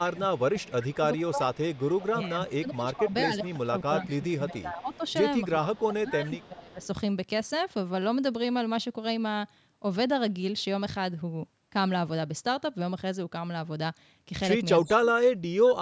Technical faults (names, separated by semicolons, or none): speech suppressed in double talk; echo leak